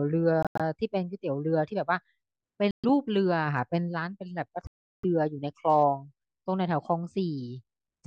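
At 0.43–0.61 s, 2.71–2.85 s and 4.67–5.05 s, the speech drops abruptly to silence and resumes further on. This is likely a Bluetooth dropout, with late packets discarded.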